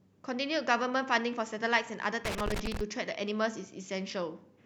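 At 2.25 s the speech breaks into loose connector crackle that runs until about 2.81 s, roughly half a second of irregular scratching and crackle. A worn or dirty contact somewhere in the chain is making and losing connection as it shifts, so the signal is chopped on and off, and any DC on the line turns each reconnection into a pop. On a waveform this shows as jagged gaps and sharp spikes; a spectrogram shows scattered broadband vertical streaks.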